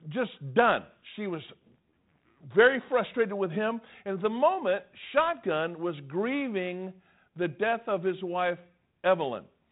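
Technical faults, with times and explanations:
No faults to report; the speech sits in a telephone band that stops near 3.9 kHz, consistent with a G.726 ADPCM path at 32 kbit/s working as designed.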